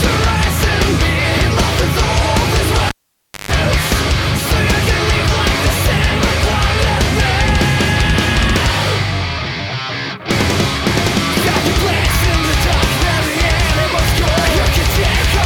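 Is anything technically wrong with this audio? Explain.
Yes. A cable pulled and plugged in at 2.89 to 3.51 s: the live lead comes out with a pop, leaving about 0.58 s of near silence. As the plug goes back in, the tip touches first and picks up 150 ms of 50 Hz mains buzz, then a second pop brings the sound back.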